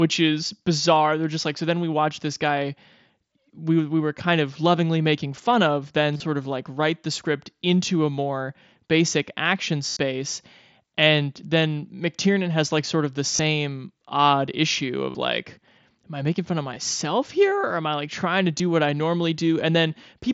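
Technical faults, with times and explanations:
6.14 to 18.60 s, concealed Bluetooth headset packet loss at 6.14–6.20 s (45 ms missing, longest gap 30 ms), 9.90–9.97 s (68 ms), 13.36–13.39 s (30 ms), 15.10–15.15 s (45 ms), 16.74 s (15 ms) and 18.59 s (8 ms). The receiver patched each gap by repeating the best-matching slice of the previous ~20 ms. The single lost packet at 18.59 s is nearly hidden. The longer ones become a held buzzy tone at full level, with a slight warble as real audio resumes.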